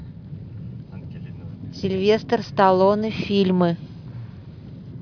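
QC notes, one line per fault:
Nothing stood out on listening to this speech.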